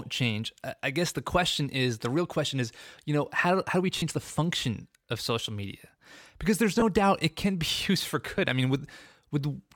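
At 3.98 to 4.03 s, between "how how do we" and "the function of social", lost LE Audio frames leave a 40 ms gap. Shorter ones follow at 6.80 to 6.82 s, between "social media because there's" and "doubt it can be", and at 8.37 s, between "used for" and "i mean". Unlike a clean dropout, LC3 concealment fills each gap with a noisy smear instead of silence.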